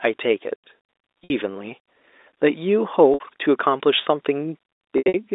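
At 1.24 s and 3.14 s, packet loss with pitch repetition covers gaps of about 60 ms by repeating the last pitch period, giving a brief buzzy hold. From 4.98 to 5.14 s, 140 ms is lost in runs up to 80 ms, fading toward silence before cross-fading back.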